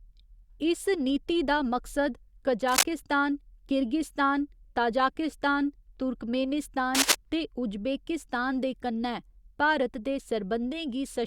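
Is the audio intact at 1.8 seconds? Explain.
Yes, at 1.8 seconds the speech plays through cleanly with no audible dropout, click, distortion or other fault.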